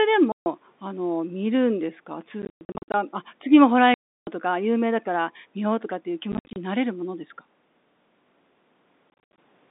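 Hard-edged dropouts chop the speech: a solid 140 ms hole at 0.32 to 0.46 s, scattered holes from 2.42 to 2.94 s, a solid 330 ms gap at 3.94 to 4.27 s, and scattered holes at 6.32 to 6.56 s and 9.10 to 9.38 s. This is packet loss filled with silence: lost packets were replaced by nothing. The gap lengths fit 10 ms packets. The G.711 telephone band around them runs from 200 Hz to 3.7 kHz.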